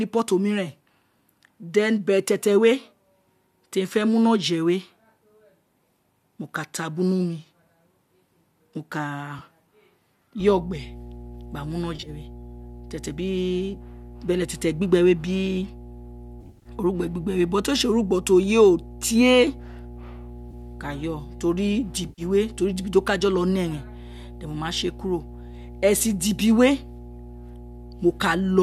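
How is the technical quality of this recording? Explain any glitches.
The recording is damaged by two faults: repeated dropouts and a steady hum. The speech itself likely passed through a low-delay AAC codec at a moderate bitrate.

AAC frame loss with concealment occurs at 9.4 s, 11.96 to 12.09 s, 16.41 to 16.69 s, 20.5 s and 22.09 to 22.22 s. The decoder patches missing audio from earlier spectrum, giving brief smeared, phasey gaps.

Mains hum runs from 10.4 s to the end. It is a steady 60 Hz tone about 20 dB below the speech, from ground-loop or transformer coupling.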